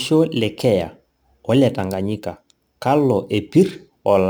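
Crude rate conversion runs throughout the speech, with samples dropped on a nearest-sample basis and no filtering, which fits a 48 kHz to 44.1 kHz change. The repeating error sits around 30 dB below the speech as a gritty, inharmonic fizz riding loud and sibilant sounds.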